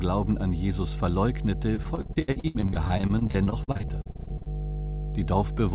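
A steady low drone at 50 Hz runs under the whole clip, loud enough to sit nearly level with the speech itself. This is mains hum, where a ground loop or a nearby transformer has let the power line leak into the signal.

From 1.76 s to 4.48 s the speech turns choppy and robotic. This is repeated packet loss: 37 gaps, the longest 69 ms, left holes that were patched by stretching the preceding sound. About a third of that span is concealed rather than real. Throughout, nothing is heard above 4 kHz, which points to a narrowband call codec such as G.711.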